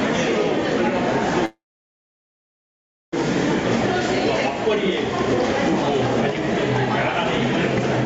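A recording of everyday sounds with gain pumping throughout: the background swells between loud events and ducks by about 10 dB under each one, so the waveform envelope looks squashed, likely from excessive input gain feeding a fast limiter. From 1.45 to 3.14 s there is a call audio freeze. A brief decaying continuation gives way to roughly 1.55 s of near-silence, showing as a flat waveform and a blank spectrogram band. The sound then resumes where it stopped, with nothing lost, likely from a jitter-buffer underrun. The spectrogram is empty above 8 kHz throughout, consistent with the call path.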